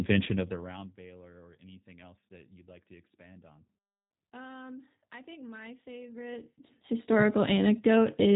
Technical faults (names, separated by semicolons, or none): G.729 codec